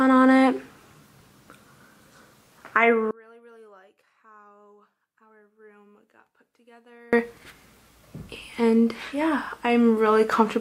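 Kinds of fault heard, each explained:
One channel inverted: from about 3.11 s to 7.13 s the sound suddenly collapses, dropping by about 33 dB, so what's centred and shared between left and right nearly disappears and only a faint residue is left. That's what you get when the two channels cancel on a mono fold-down, so the likely cause is one side running with reversed polarity for that stretch. Full level comes back right after.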